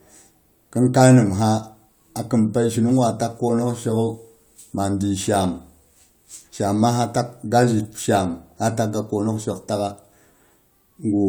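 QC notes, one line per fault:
Nothing stood out on listening to this speech clip.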